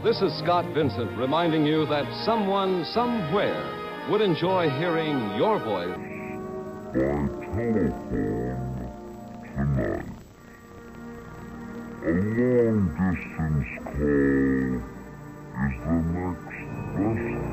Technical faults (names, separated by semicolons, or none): stereo read as mono